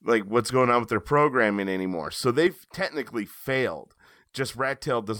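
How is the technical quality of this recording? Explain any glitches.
The recording has one clear glitch. Sudden gain jump at 2.47 s: the level drops by about 6 dB in a single step, likely a digital gain change applied without a ramp, and sound and background noise fall together through the end.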